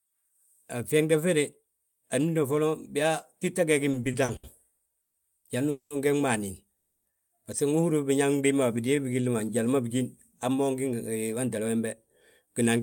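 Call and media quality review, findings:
Repeated stalls (stutter), 3.91–5.17 s: seven short gaps, longest 130 ms, 350 ms filled, 28% of span. Jitter buffer underruns; spectrogram shows repeated smeared, frozen harmonic patches.

Call audio freeze, 5.70–5.93 s and 6.75–7.08 s: 200 ms and 300 ms of fading buzz, no silence. Likely delayed packets draining the jitter buffer; waveform shows smooth decaying envelope, flat harmonics.

Jitter buffer slow-down, 8.27–9.64 s: speech drawn out to 89% speed, 165 ms added, pitch unchanged. Repeated pitch periods; waveform shows duplicated cycles, spectrogram stretched horizontally.

Jitter buffer speed-up, 11.15–12.79 s: speech hurried to 110% speed, roughly 150 ms removed, pitch unchanged. Dropped pitch periods; spectrogram compressed in time, waveform cycles spliced.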